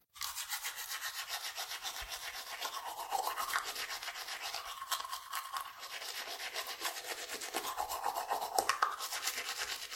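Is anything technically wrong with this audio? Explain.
Yes. Throughout the clip, the audio was likely transcoded between lossy codecs: first an MP3-style encode near 64 kbit/s, then a Vorbis-like one at a similar rate. The second codec wastes bits re-encoding the first one's artefacts, so their smearing and swirly distortion stack up, and nothing survives above 16.6 kHz.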